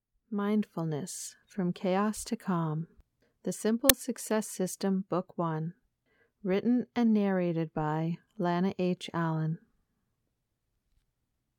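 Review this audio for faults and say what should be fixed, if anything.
File tags played as audio at 3.89 s: an embedded cover picture's compressed bytes were decoded as samples, giving a brief hard-edged burst of very loud white noise. To prevent it, have the player or converter parse the container properly so tag and artwork blocks are skipped, never passed to the decoder.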